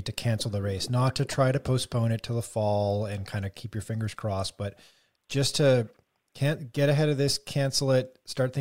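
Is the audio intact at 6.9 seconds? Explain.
Yes, the speech is intact at 6.9 seconds, with no audible fault at that moment.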